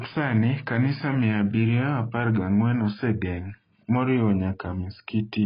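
Heavy AAC compression, likely AAC-LC at a starved bitrate consistent with around 16 kbps, runs through the whole clip. The encoder lowers the cut-off and coarsely quantises what remains, so the speech sounds dull and smeared, with a warbling, fizzy texture on sibilants.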